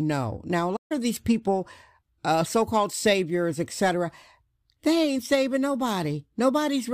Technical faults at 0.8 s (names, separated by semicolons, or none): playback stall